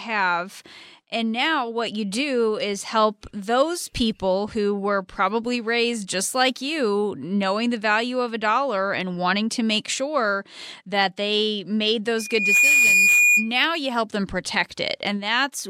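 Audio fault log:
12.18–13.53 s: loudspeaker feedback squeal, a single tone near 2.4 kHz that swells over roughly 0.4 s after "sure that they made" to about 10 dB above the speech, and it persists until "you help them". The microphone is hearing its own loudspeaker, and at that frequency the loop gain exceeds one, so the tone keeps growing on each pass.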